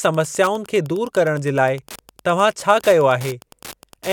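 A Wi-Fi radio sitting close to the audio circuitry is being picked up and rectified, so its transmissions leak into the signal as Wi-Fi interference for the whole clip. What comes through is the radio's beacon, repeating every 102.4 ms, heard as a steady mechanical ticking just under ten times a second. It sits roughly 25 dB below the speech, quiet but persistent.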